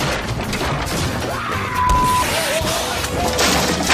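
The recording was likely handled in 1.0 s chunks, with a brief stretch of around 20 ms lost each time one chunk closed and the next began, leaving audio missing between chunks. At 0.80 s and again at 2.76 s, the sound on either side of the gap is butted together with no silence in between, so it jumps forward abruptly, a tiny skip where a sliver of the audio has vanished.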